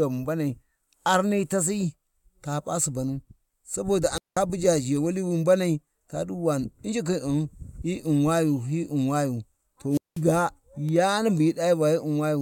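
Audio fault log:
4.14–4.38 s and 9.90–10.22 s, wireless microphone squelch dropout: the radio link fades, hiss swells, then the receiver's squelch mutes the output for 187 ms and 192 ms. The first falls between "sabo da a" and "buja zhewali". The static rise before the hole sets it apart from a clean digital dropout.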